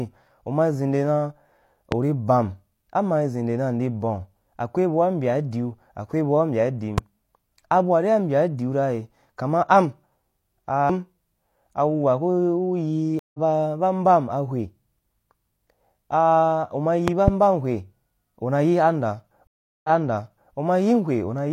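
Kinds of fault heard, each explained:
Loud pop: at 1.92 s, 6.98 s and 17.08 to 17.30 s, sharp pulses jump about 15 dB above the speech, and the last one is a double pop at about 20 dB. The likely cause is a sudden voltage step from a switch, plug or static discharge. The speech carries on underneath each pop.
Stream reconnect: at 13.19 s and 19.47 s the connection breaks and the sound goes silent for 149 ms and then 369 ms. The player restarts decoding mid-stream, resuming about 150 ms later the first time and 697 ms earlier the second, so a stretch repeats.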